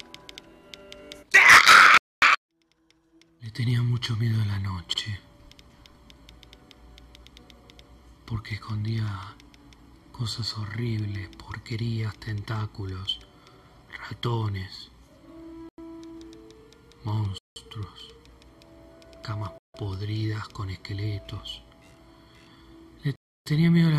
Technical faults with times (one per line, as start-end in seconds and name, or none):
1.98-2.22 Bluetooth stall
15.69-15.78 Bluetooth stall
17.38-17.56 Bluetooth stall
19.58-19.74 Bluetooth stall
23.16-23.46 Bluetooth stall